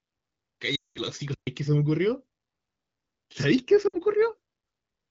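From 0.75 to 1.01 s, a run of lost AMR speech frames: corrupted frames failed their checks, so the wideband decoder repeated the last good speech parameters with dropping gain. The sound drops to near silence within two frames in this 0.25 s gap, which fits about ten lost frames. Between 1.34 and 1.47 s comes a playback stall. The player likely ran short of data, and the speech cuts to silence for about 0.13 s before resuming. At 3.88 to 3.96 s, lost AMR speech frames recur more briefly, a short drop to near silence consistent with three frames. Speech returns thin for a moment.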